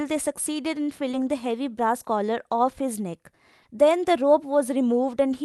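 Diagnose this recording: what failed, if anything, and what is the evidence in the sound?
Short concealed packet loss at the network and jitter-buffer stage: brief smears at 1.11 s and 3.63 s. 20 ms of audio arrived too late, so the decoder extended the preceding sound and blended back. A spectrogram shows smoothed, copied harmonics bridging each gap; the waveform shows a flattened, repetitive stretch.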